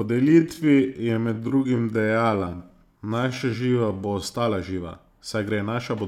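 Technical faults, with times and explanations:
0.0–4.24 s, time-stretched section: the speech drags at about 0.65× speed at unchanged pitch, likely from software repeating short pieces to lengthen it.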